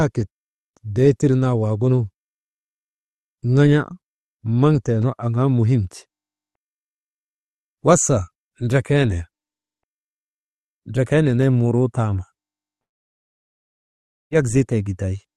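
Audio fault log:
12.81–14.33 s, long network dropout: The sound stops for about 1.5 s and then resumes later on, with that stretch gone. The last sound before the gap is stretched into a brief fading buzz or hiss. Near-silence holds for almost the whole gap. This is likely a network dropout in the call path: no packets arrived, so the receiver briefly covered the hole and then went quiet. The upper band, cut off near 12 kHz, fits an Opus stream at around 32 kbps.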